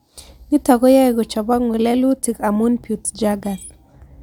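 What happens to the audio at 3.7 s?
Nothing goes wrong at 3.7 s; the speech carries on intact through that moment, with no dropout, click or distortion.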